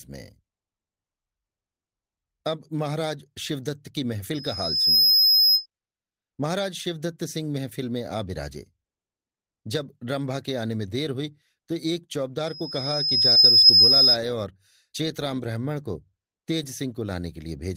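A microphone in this speech recording was picking up the loudspeaker it fed, and the loop gain exceeded one at 5.1 kHz, producing a loudspeaker feedback squeal twice. From 4.34 to 5.66 s the tone builds over roughly 0.7 s to around 10 dB above the speech. From 12.46 to 14.18 s it builds over about a second to around 15 dB above it. Inside that second squeal, 40 ms of the call reached the decoder too late, and the receiver concealed this short packet loss by extending the preceding sound across about 43 ms from 13.31 to 13.38 s, heard as a brief smear before the real signal blends back in. Part of that stretch, 13.36 to 13.38 s, and again 16.62 to 16.64 s, is a lost packet rebuilt from error correction: a single 20 ms packet each time was replaced by the low-bitrate copy carried in the next one, so there is no gap, but those frames sound rougher and noisier.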